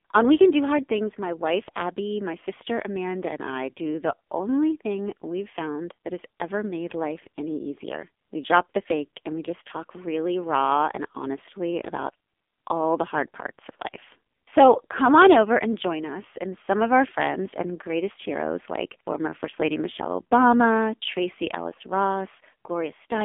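Throughout, the speech sounds buzzy, synthetic and boxed in, confined to roughly 250 Hz–3.5 kHz: AMR narrowband mobile codec damage, whose heavy coarseness fits a low 5.9 kbps mode.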